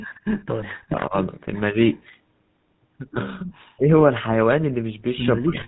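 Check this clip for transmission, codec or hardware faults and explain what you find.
The speech carries four kinds of fault: constant codec damage plus brief echo, bit-error and suppression events.

GSM full-rate codec, throughout: a buzzy, gravelly roughness, consistent with 13 kbps full rate. Its pulse-driven vocal-tract model leaves a spectrogram empty above 4 kHz with coarse harmonics.

Echo leak, 0.00–0.41 s and 1.93–1.97 s: a faint delayed copy of the voice, about 160 ms behind and roughly 20 dB down, then about 200 ms behind and barely audible. It is likely a loudspeaker echo that the canceller missed, seen as faint repeated smears.

GSM bit errors, 0.62–0.66 s: a short squawk or gargle. Corrupted decoder parameters bend the spectrum, showing as a vertical smear or spike in the waveform.

Speech suppressed in double talk, at 0.80–1.14 s, 3.74–3.90 s and 5.40 s to the end: the voice drops by roughly 35 to 40 dB. 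At 1.72–1.79 s there is only a slight dip. This is likely an echo canceller muting the talker during overlap, visible as gaps or notches in the waveform envelope.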